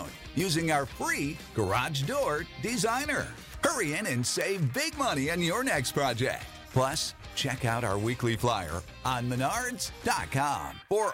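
The audio carries word clock ticks from 0.14 s to 11.13 s, almost the whole clip. They come at a steady rate, roughly ten per second, and vary in strength. The receiving device ran on its own clock, not locked to the sender's digital link. Each time the two clocks slipped past each other, a few samples were misread and one sample was dropped or repeated. The rate points to a clock mismatch in the region of 200 ppm.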